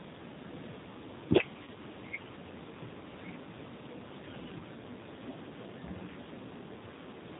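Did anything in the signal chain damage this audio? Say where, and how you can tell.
Yes. At the codec stage, the whole clip carries G.729 coding, clearly audible. Nothing above 4 kHz survives, and the speech has the slightly rough, synthetic grain of a pulse-excited vocal-tract model. Unlike simple low-pass filtering or a low sample rate, the fine structure itself sounds rebuilt.

At the network stage, there is VoIP packet loss concealed by the speech codec at 1.63 to 1.71 s and 4.59 to 4.62 s. The decoder fills each gap by extrapolating from its last pitch and filter while lowering the gain frame by frame. The first gap's length fits two lost 20 ms packets. A dropout would produce silence or a click instead.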